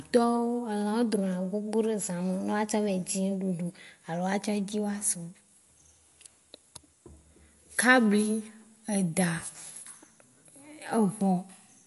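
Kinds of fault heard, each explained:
MP3 compression: watery, swirly speech with no content above about 11.3 kHz, likely from a low-bitrate MP3 encode around 48 kbps dropping treble and weak frequency lines.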